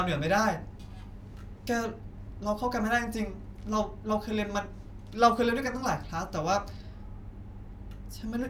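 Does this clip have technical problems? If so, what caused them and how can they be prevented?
No, nothing in this speech recording points to a technical fault, so there is nothing to trace or prevent.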